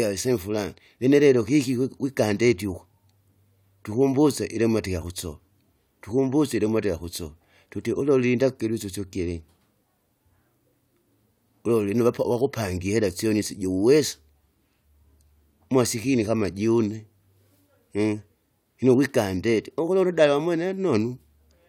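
No technical faults are audible in this speech recording.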